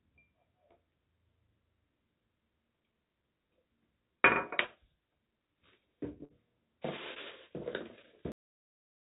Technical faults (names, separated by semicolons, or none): short concealed packet loss; burst of packet loss; cut-off end